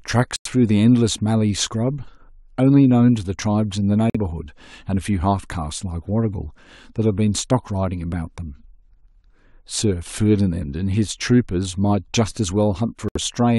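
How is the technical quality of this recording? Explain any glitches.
The speech drops out abruptly three times: at 0.36 to 0.47 s, 4.10 to 4.17 s, and 13.09 to 13.17 s. Each gap is clean silence lasting 70 to 110 ms, and the speech resumes on schedule. This is a corrupt frame muted fault. Damaged bits in the compressed stream made the decoder reject whole frames, and the player substituted silence for them, so each hole spans a few frame lengths while the timing stays intact.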